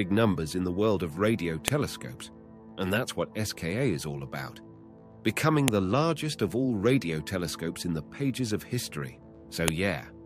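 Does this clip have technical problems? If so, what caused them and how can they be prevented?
Yes. File header played as audio: sharp clicks at 1.68, 5.68 and 9.68 s, every 4 s. Joined WAV pieces kept their header bytes, which play as samples. Strip each header before joining or streaming the pieces.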